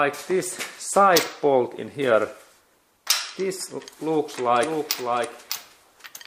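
From 4.61 s to the end there's a doubled audio track: a second copy trails about 0.7 s behind, a bit quieter, likely a slower second capture path.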